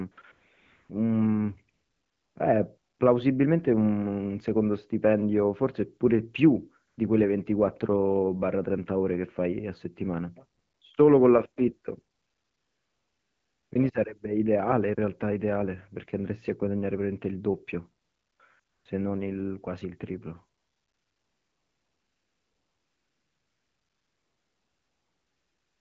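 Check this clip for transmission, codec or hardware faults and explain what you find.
The clip shows one recurring fault, AMR comfort noise, across eleven pauses from 0.11 s to the very end, starting at 20.57 s, lasting 20 ms to about 5.2 s. The phone stopped sending speech frames during detected silence, so the receiver substitutes smooth synthetic noise for the real background, audibly switching in and out. The AMR wideband (HD Voice) speech itself sounds clear, which fits a rate around 12.65 kbit/s.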